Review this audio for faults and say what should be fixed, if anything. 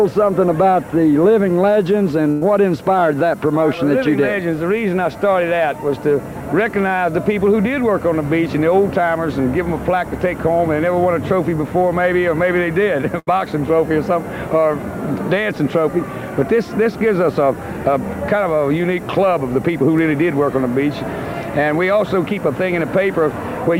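Two bursts of packet loss occur, at 2.31 to 2.43 s and 13.19 to 13.29 s. About 100 ms and 80 ms of audio went missing. The receiver stretched the last sound and faded it, then jumped ahead. A larger jitter buffer and forward error correction would prevent this.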